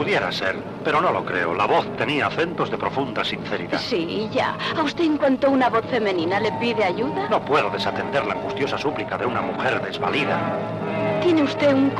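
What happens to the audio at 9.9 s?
A sudden gain jump runs from 9.85 to 9.94 s, likely from a digital gain setting applied in a single sample with no ramp. Sound and background noise drop together by about 6 dB for roughly 90 ms, then step back up.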